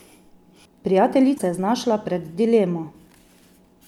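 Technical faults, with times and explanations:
1.35–1.40 s, damaged data in a compressed stream: corrupted frames make the decoder misread and resync, producing a brief disturbance.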